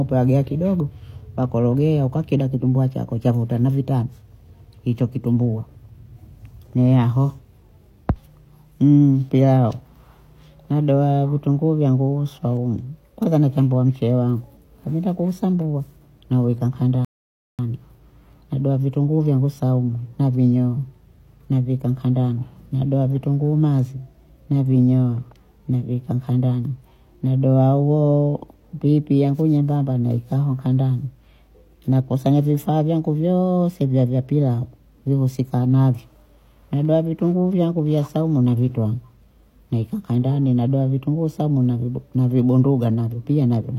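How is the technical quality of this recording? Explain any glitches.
One glitch stands out: a rebuffering stall. At 17.05 s, right after "wangu nkabinda kuusambua naweka", the speech stops dead. Silence follows until 17.59 s. The player had used up all the audio it had downloaded. It paused and waited for more data to arrive. Playback then picks up exactly where it broke off. No speech is skipped. The gap adds about 0.54 s of dead air to the clip.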